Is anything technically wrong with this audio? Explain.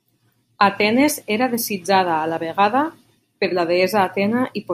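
No, nothing technically wrong can be heard in this speech recording. There is no fault to report anywhere in the clip.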